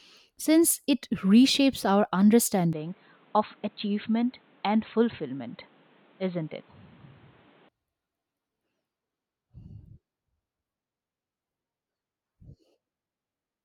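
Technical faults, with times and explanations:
2.73–7.69 s, input switched to a poorer device: the speech abruptly turns dull and boxy, slightly quieter, over faint new background noise, with no gap at either change, likely a jump to a narrower-band microphone. A spectrogram shows a flat ceiling at 4.2 kHz, and the waveform shrinks by roughly 5 dB.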